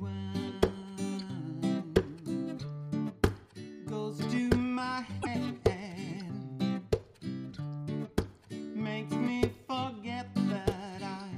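At 5.19 s to 5.27 s there is damaged data in the compressed stream: corrupted bytes leave the decoder unable to read those frames, so it loses sync and hunts for the next frame header. The spectrogram and waveform show a discontinuity lasting about 84 ms.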